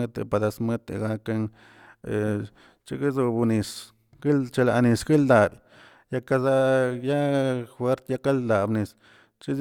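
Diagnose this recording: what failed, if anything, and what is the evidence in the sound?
Nothing in the signal chain has failed here: the speech recording shows no audible technical fault at any stage from capture to playback.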